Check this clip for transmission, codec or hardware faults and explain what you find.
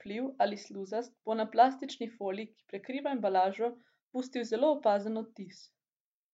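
No faults are audible anywhere in the speech.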